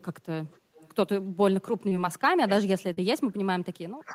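From 0.48 to 0.95 s a faint delayed copy of the speech trails it by 294 ms, well below the direct sound. This is an echo leak, likely from a loudspeaker echo canceller letting residue through. The fixed delay and repeated content set it apart from reverberation.

At 1.89 to 1.93 s, short concealed packet loss leaves a brief smear where about 20 ms of audio never arrived and was patched by extending the preceding sound. Unlike a dropout, there is no silent gap.

From 2.07 s to the end, speech suppressed in double talk makes the speech dip deeply and unevenly, likely because the echo canceller turned the talker down while both sides spoke.

At 2.93 to 2.99 s, a second short concealed packet loss replaces about 40 ms with synthesized continuation, a longer wobble than the first.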